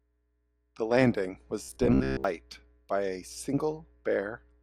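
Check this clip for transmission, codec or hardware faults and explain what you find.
One fault is present. From 1.63 to 2.24 s, robotic sound from repeated short buffers, likely 15 ms chunks looped over missing audio: a rigid 66.7 Hz buzz that, unlike steady hum, still follows the words.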